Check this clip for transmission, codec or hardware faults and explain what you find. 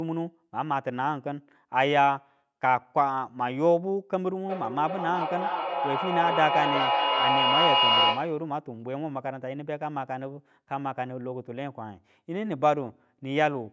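One transmission fault stands out. Feedback echo between two devices, 4.47 to 8.52 s: a second device on the call replays the audio into this microphone, so speech returns roughly every 0.4 s, the repeats piling up to about 3 dB above the speech.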